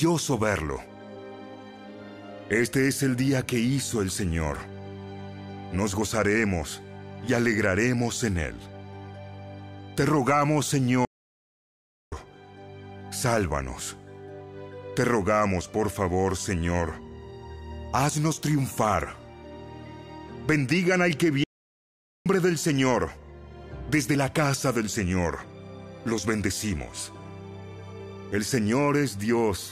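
The audio has two playback stalls: the sound cuts to silence at 11.05 s for about 1.07 s, and again at 21.44 s for about 0.82 s. Unlike brief dropouts, these are long, clean gaps in mid-flow, likely from the player running out of data or being blocked.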